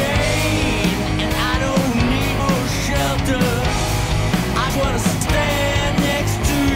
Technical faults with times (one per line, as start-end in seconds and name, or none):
4.70 audio missing between chunks